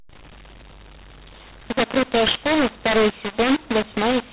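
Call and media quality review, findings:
mu-law and A-law mixed up, throughout the clip. The speech is harsh and gritty, with levels scrambled: some peaks are too loud, others too weak, and pauses are filled with hiss instead of silence. The probable component is the G.711 decoder. The A-law encoded stream is being expanded with the mu-law table, so the companding curves don't match. Quiet samples are lifted well above zero, and the whole band stays capped below 4 kHz.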